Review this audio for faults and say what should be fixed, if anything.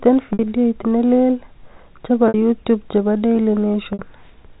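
There are three short dropouts in the speech, at 0.33 s, 2.28 s (just before "youtube chebo") and 3.93 s, each about 60 ms long. It's packet loss with pitch repetition. The receiver fills each gap by looping the last pitch period, so you hear a brief held, slightly buzzy tone instead of a clean cut, then the speech picks back up. A gap that length likely points to a couple of packets going missing each time. The narrowband telephone sound comes from the G.711 coding, which is working normally. To prevent it, give the stream a larger jitter buffer or add forward error correction on the network path.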